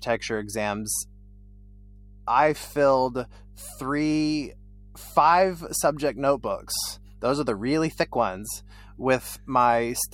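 Right from the start and all the way through, there's mains hum under the speech: a steady 50 Hz drone with a few low harmonics, sitting roughly 25 dB below the talker. That's the power line leaking in, most likely through a ground loop or a nearby transformer.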